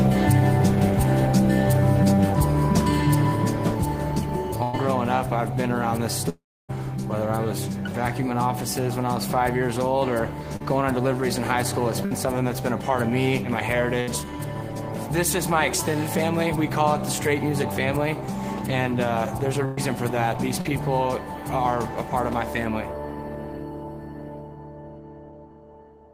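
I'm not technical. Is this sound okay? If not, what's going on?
No. The connection lost bits of the sound several times.

At 4.63, 12.05, 14.01 and 19.65 seconds there is a burst of packet loss. Each time, between about 0.06 and 0.12 seconds goes missing. The player stretches the last sound to cover the hole, then jumps ahead.

From 6.29 to 6.71 seconds the sound fades out and goes quiet for about 0.29 seconds. Then it comes back with part missing. This is likely a long network dropout.

At 10.57 and 20.61 seconds there is a short concealed packet loss. About 40 ms is lost each time and patched over, so the sound briefly smears or wobbles.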